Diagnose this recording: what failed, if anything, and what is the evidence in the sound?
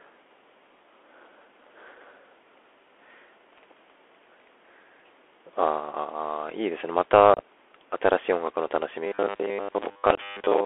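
Codec stage: the Bluetooth CVSD headset codec runs throughout. Audio is confined to roughly 300 Hz to 3.4 kHz. Slope-overload scratchiness and granular hiss are plainly audible.

Network stage: unconcealed Bluetooth headset packet loss. About 45 ms drops out across 7.34 to 7.40 s, with the longest hole 30 ms. Another 22.5 ms gap falls at 10.15 to 10.20 s. Edges are abrupt.

Driver or buffer stage: from 9.07 s to the end, there is a robotic sound from repeated short buffers. A rigid 100 Hz buzz replaces most of the sound, likely from 10 ms buffers being replayed.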